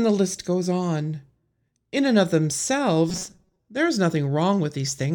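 From 3.10 to 3.60 s, just before "there is", the speech turns robotic. A rigid, metallic buzz near 188 Hz sets in. This is robotic sound from repeated short buffers. New audio likely arrived too seldom. About half the time was filled by looping slices of roughly 5 ms.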